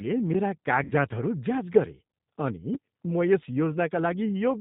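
Speech carried over a G.729 codec path, with plainly audible coding damage throughout. The band stops at 4 kHz, and the voice has the slightly rough, synthetic texture of a coder that rebuilds each 10 ms frame from a vocal tract filter, a pitch predictor and a handful of excitation pulses. The roughness and the narrow bandwidth fit the 8 kbit/s G.729A mode. Between 0.84 and 0.92 s there is VoIP packet loss concealed by the speech codec. Around 60 ms of audio is missing, which points to two lost packets. The decoder fills the hole by extending its last pitch and filter state at falling gain, so the voice smears into a fading buzzy tone or coloured noise instead of a clean gap. Because each frame depends on the previous one, the speech stays weak or distorted for a short time after the stream resumes.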